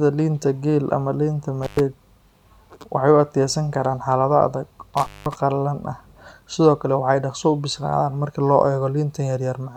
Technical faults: intermittent contact

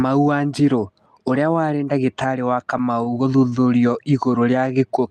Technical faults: repeated stalls (stutter); jitter buffer slow-down

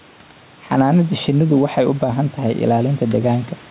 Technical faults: gain pumping

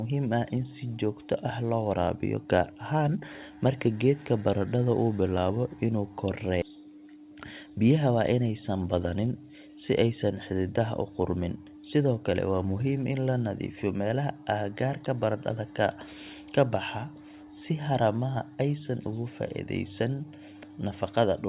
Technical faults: skip ahead; jitter buffer speed-up

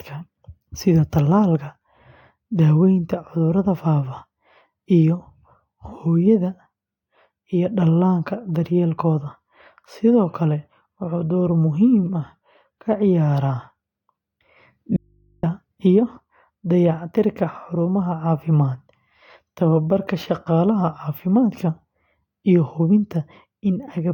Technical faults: audio dropout to a faint residue

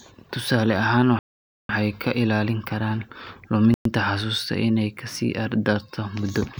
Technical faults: Bluetooth stall

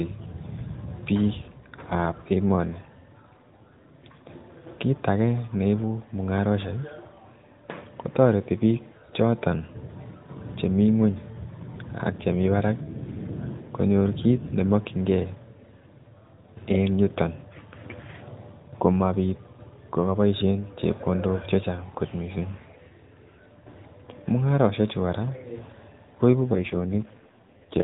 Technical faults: AMR rate drop

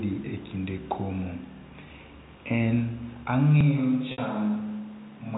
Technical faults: switch to a distant microphone; packet loss with pitch repetition

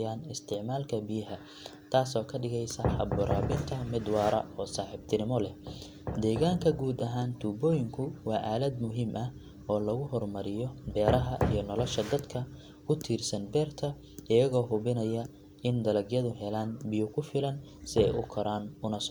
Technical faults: none

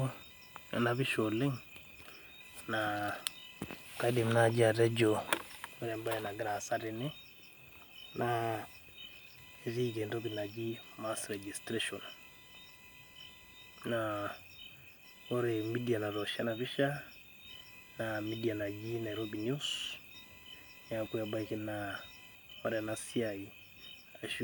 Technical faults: computer activity noise

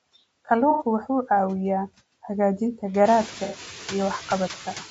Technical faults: noise suppressor artifacts; low-delay AAC compression; AAC frame loss with concealment

